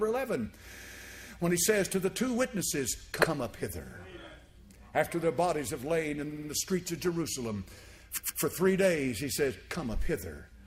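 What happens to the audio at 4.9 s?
Nothing goes wrong at 4.9 s; the audio plays through that moment intact, with no dropout, click or distortion.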